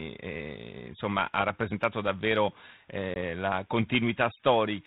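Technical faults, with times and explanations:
3.14 to 3.17 s, packet loss on an ADPCM call: right after "insomma ha rappresentato davvero" the speech drops into a hard-edged gap of about 20 ms, roughly one packet's worth, filled with silence. Because the 32 kbit/s G.726 decoder's adaptive predictor and step size keep running without the missing data, they drift out of step with the sender's, so the speech comes back with a bit of roughness before it settles.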